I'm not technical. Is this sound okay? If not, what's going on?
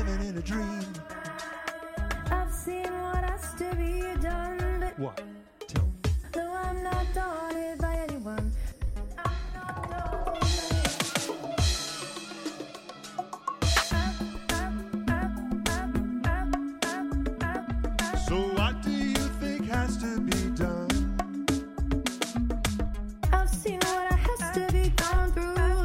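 Yes, nothing wrong can be heard in this recording.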